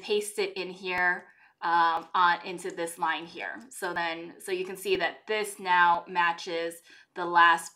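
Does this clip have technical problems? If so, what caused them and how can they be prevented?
Yes, there's audio missing between chunks: tiny skips at 0.98, 1.97, 2.97, 3.96, 4.95, 5.95 and 6.94 s, each a few milliseconds with the edges butted together. That steady one-second spacing likely means the recorder drops samples at each chunk boundary. Prevent it with continuous, gapless buffering.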